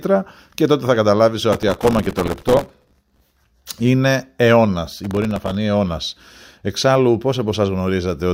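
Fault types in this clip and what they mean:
processor overload crackle: the processor kept missing deadlines on tiny audio buffers and repeated stale fragments with hard edges, so gritty crackle rides over the speech in two bursts.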